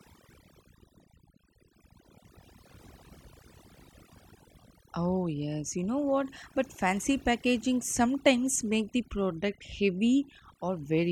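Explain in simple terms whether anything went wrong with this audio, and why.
Overdone noise removal affects the whole clip, from start to finish. A noise reduction tool was pushed too hard on a noisy recording, so it treated anything close to the background noise as unwanted and switched off those slices of the sound. Quiet parts of the speech were cut along with the noise. That leaves gaps between phrases that are almost silent but sprinkled with tiny twinkling specks.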